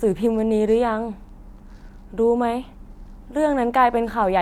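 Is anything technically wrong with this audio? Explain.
No, nothing technically wrong can be heard in this speech recording. There is no fault to describe.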